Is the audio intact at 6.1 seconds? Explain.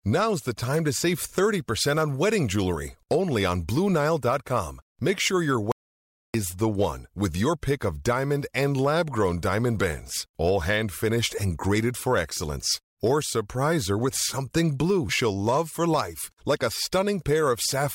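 No. An audio dropout to silence runs from 5.72 to 6.34 s. The input was likely lost briefly, so silence was written. About 0.63 s of speech vanishes into dead silence.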